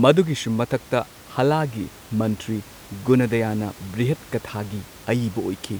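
No technical faults are audible.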